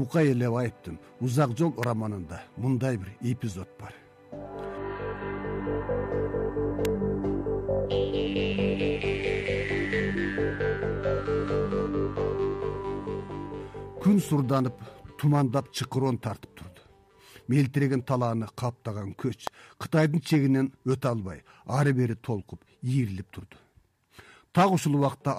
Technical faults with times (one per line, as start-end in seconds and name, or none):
1.83 electrical switching spike
6.85 electrical switching spike
19.47 electrical switching spike